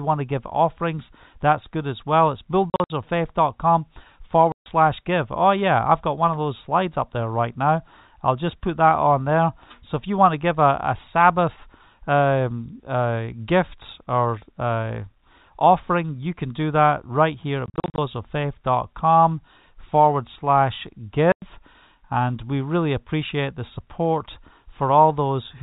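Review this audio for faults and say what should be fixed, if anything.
Packet loss filled with silence occurs four times: scattered gaps from 2.7 to 2.9 s (longest about 60 ms), a solid 140 ms hole at 4.52 to 4.66 s, scattered dropouts at 17.66 to 17.98 s just after "that right here at" (longest 40 ms), and a 100 ms hole at 21.32 to 21.42 s after "forward slash". The receiver inserted digital silence for missing packets, so each gap has hard edges. The gap lengths step in multiples of 20 ms, which points to 20 ms packets. The G.711 telephone coding underneath remains band-limited below 4 kHz. Prevention: enable packet loss concealment and a jitter buffer at the receiver, and add forward error correction or redundancy on the lossy link.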